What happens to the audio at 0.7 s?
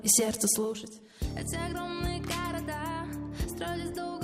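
At 0.7 s you're in the middle of zipper noise, 0.42 to 1.14 s: the level drops in 1 dB steps, around fifteen a second, so each unsmoothed jump ticks audibly.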